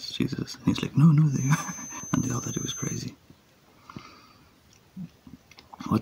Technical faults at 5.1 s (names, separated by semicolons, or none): none